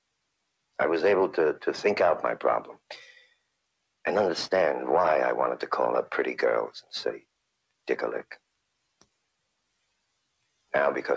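Between 3.09 and 3.49 s the sound is cut by the noise suppressor: for about a third of a second it treats steady sound as noise and pulls it down by as much as about 21 dB, so sustained parts sink and decays are clipped short while sharper onsets still come through. That selectivity sets it apart from a packet-loss dropout, which would silence everything abruptly. The bandwidth ends at 8 kHz, as expected from the G.722 call path.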